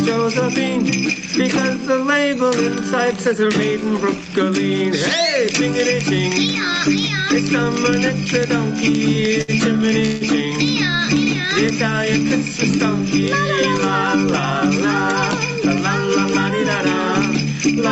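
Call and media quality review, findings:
Call and media quality review, findings:

Gain pumping, whole clip: gain swings about 10 dB, pulled down on each loud sound. Likely an overdriven input with a fast limiter. Unlike a noise gate, the background never cuts out.

Short stall from a late packet, 9.41–9.50 s: sound held about 68 ms. Jitter buffer ran empty, then resumed with nothing lost, so it is not a dropout.

Call audio freeze, 10.06–10.23 s: last sound stretched for about 151 ms, never reaching silence. Likely a longer jitter-buffer underrun, and a longer hold than the stall at 9.4 s.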